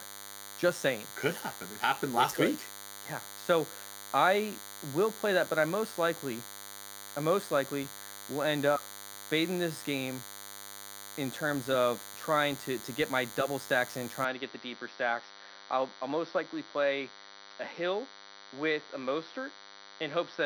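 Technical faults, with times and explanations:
Throughout: DECT cordless phone buzz, a thin 100 Hz buzz with dense harmonics, sitting roughly 15 dB under the speech, from rectified 10 ms radio bursts.
14.24 to 20.45 s: input switched to a poorer device, likely, right after "my double stacks in"; the speech abruptly turns duller, nothing above 6 kHz, and drops about 5 dB.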